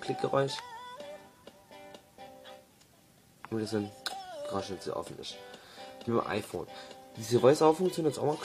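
A short glitch cuts through the sound at 2.23 s, lasting about 60 ms, and a second one at 6.04 s, about 50 ms long. Both come from damaged data in a compressed stream: some bytes in the encoded file were lost, zeroed or overwritten, so the decoder misread or rejected those frames, lost sync, and had to hunt for the next valid frame header before normal playback resumed.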